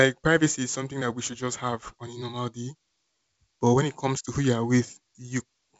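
No faults are audible in the speech, which carries the wideband telephone band cut off near 7.7 kHz, consistent with G.722 coding at its full 64 kbit/s rate.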